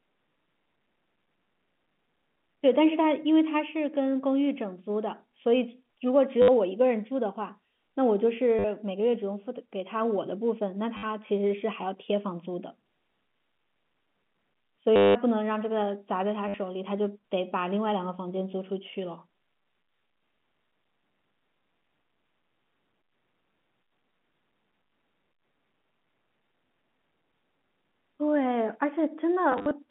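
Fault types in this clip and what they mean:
Packet loss with last packet repeated: at 6.42, 8.59, 10.97, 14.96, 16.48 and 29.52 s, missing audio lasting 50 to 190 ms is filled by replaying the last packet, so runs buzz near 100 Hz, which fits 10 ms packets.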